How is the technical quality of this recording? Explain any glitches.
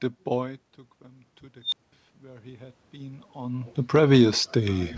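The recording has two technical faults on a speech signal that is band-limited at 8 kHz, which fits a wideband call codec such as G.722.

From 1.61 to 1.93 s an unstable filter runs away. A tone of roughly 4 kHz swells over about 110 ms into a loud squeal, then overflows and drops to silence for about 200 ms.

From 3.8 to 4.93 s the automatic gain is falling. The control eased its gain down by about 4 dB, so the speech and its background sink together.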